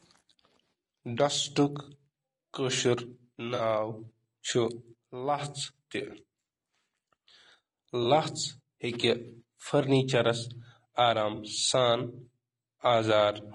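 From start to end the speech is rough and grainy. Noise sits between the harmonics, and the top band sounds thin and synthetic. This is likely low-delay AAC compression, AAC-ELD. Its short frames resolve pitch poorly. The damage fits a bitrate around 32 kbps.

AAC frame loss with concealment hits at 1.83 to 1.89 s, 3.55 to 3.61 s and 5.74 to 5.78 s, each about 40 ms. Then come two shorter gaps of about 20 ms, at 8.03 to 8.06 s and 11.35 to 11.39 s. The decoder patches each gap from the last good spectrum. Each one sounds like a brief smeared, noisy patch.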